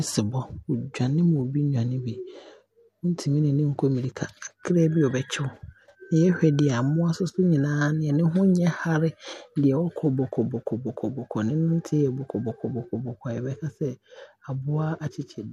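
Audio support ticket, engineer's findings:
No faults found in the speech signal: level, continuity and timing hold steady throughout, with nothing in the playback chain calling for attention.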